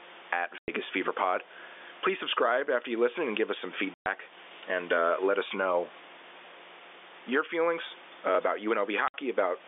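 A speech recording carried over a telephone-band line, with gain pumping throughout, the level swinging by roughly 15 dB. The likely cause is gain set far too high with a fast limiter clamping each peak. On a waveform the envelope looks flattened. Packet loss filled with silence cuts three hard-edged gaps, at 0.58–0.68 s (100 ms), 3.94–4.06 s (120 ms) and 9.08–9.14 s (60 ms). These lengths fit 20 ms packets. Each gap shows as a flat silent stretch in the waveform and a blank vertical band across the spectrogram.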